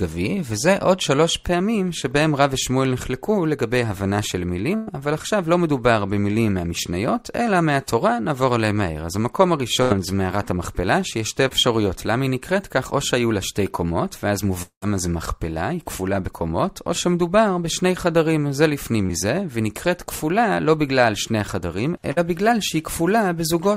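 Burst of packet loss at 4.75 s: about 120 ms of audio went missing, and the receiver stretched the last sound into a fading buzz or hiss before resuming further on. Another burst of packet loss at 9.82 s drops about 80 ms the same way. Short concealed packet loss at 11.48 s: roughly 20 ms was filled by continuing the preceding sound, heard as a brief smear. At 14.62 s the sound holds as a fading tail for about 0.2 s, ending in roughly 100 ms of silence before returning with material skipped, likely a long network dropout. Short concealed packet loss recurs at 19.06 s and 22.12 s, each patching about 40 ms with a quick smear or wobble.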